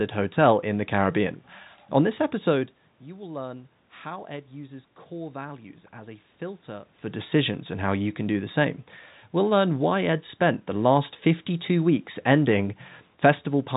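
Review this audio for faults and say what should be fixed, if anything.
Nothing needs fixing here.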